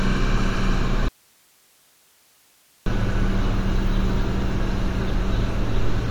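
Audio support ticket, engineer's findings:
Audio dropout to a faint residue, 1.08 to 2.86 s: signal lost for about 1.78 s, only hiss remaining, roughly 40 dB below normal level. Abrupt cut and return, not a fade or natural pause. Hiss persisting means the downstream path stayed live, likely an upstream source or link interruption rather than a muted or dead output stage.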